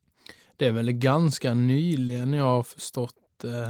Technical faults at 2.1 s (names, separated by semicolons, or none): short concealed packet loss